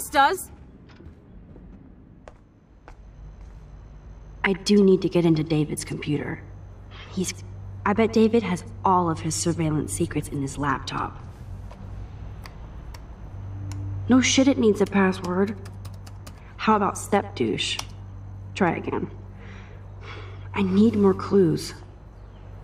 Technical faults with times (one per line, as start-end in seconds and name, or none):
none